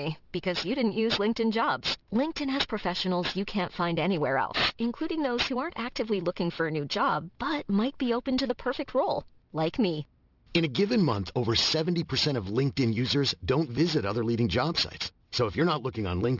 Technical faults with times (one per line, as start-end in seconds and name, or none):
0.00-16.39 aliasing